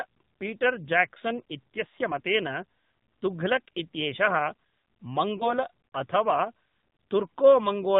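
From the start, the speech carries the AMR narrowband mobile codec. Nothing above 4 kHz survives, and the vocal-tract model, driven by sparse pulses, leaves the voice plainly buzzy and synthetic, which fits the 7.4 kbps mode. Unlike a simple low-pass filter, which only dulls the sound, this adds a coarse, artificial texture to the voice. That texture is the mark of a low-rate speech coder rather than of bandwidth loss alone.

At 5.38 s one lost AMR speech frame occurs. A single 20 ms frame failed its checksum, so the decoder repeated the previous pitch and vocal-tract settings at reduced gain. The effect is a brief dip and warble that settles by about 5.53 s as the voice comes back rough for a moment. A network dropout would instead leave a hard gap or click. Here the sound is smeared and carried through the gap.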